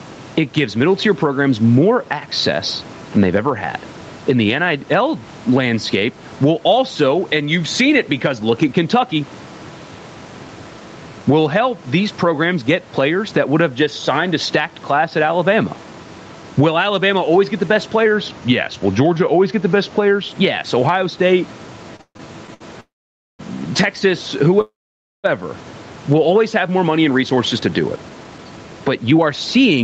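Speech carried over a call, with nothing above 8 kHz and room noise sitting about 30 dB below the voice, and it shows several faults. Gain pumping runs through the whole clip, with the level swinging by roughly 10 dB. The likely cause is input gain set far too high, with a fast limiter or compressor clamping every loud syllable, so loud and quiet passages are pressed together and the sound is squashed. From 18.06 to 20.28 s, right after "always get the best", there is a drift correction step. Playback slows by about 5.8% and the pitch drops by about a semitone (103 cents) together. This is likely clock-drift compensation retuning the playback rate in a single jump to rebalance its buffer. Between 21.96 and 22.62 s, repeated stalls (stutter) appear as five short hold-ups. The receiver stretches the last sound to bridge 260 ms in total, the longest gap being 140 ms, and 39% of that stretch is concealed. 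Nothing is lost, but the speech drags and stutters because packets kept arriving too late for the jitter buffer to stay filled. Two call audio freezes follow, at 22.80 to 23.41 s (586 ms) and at 24.61 to 25.26 s (628 ms). In each one the last sound is held briefly and then falls to about 520 ms of silence before the speech resumes exactly where it stopped. Nothing is dropped, so each freeze inserts a gap and pushes everything after it later. The likely cause is packets held up in transit until the jitter buffer ran dry. From 26.67 s to the end of the clip, after "will always have", a jitter buffer speed-up makes the speech run about 10% fast at unchanged pitch, so it sounds hurried. The receiver is trimming many short pitch-period slices in succession to shed surplus buffered delay.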